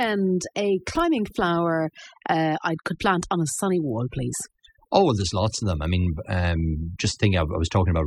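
A noise reduction stage set too aggressively runs throughout, producing overdone noise removal: near-silent gaps with twinkling specks.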